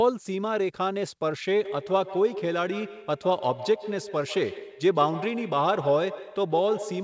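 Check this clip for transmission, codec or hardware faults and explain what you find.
One fault is present: feedback echo between two devices, from 1.64 s to the end of the clip. Two devices on the same call share a room. One plays what the other's microphone sent, and that microphone picks it up again, while each echo canceller removes only its own device's playback. Speech comes back roughly every 150 ms, thinner and more ringing with each pass, at most about 12 dB below the direct speech. Room reverberation blurs into a smooth decaying tail, but this loop returns distinct copies at a fixed interval. Through the G.722 call path, the repeats, like the direct speech, carry nothing above 8 kHz.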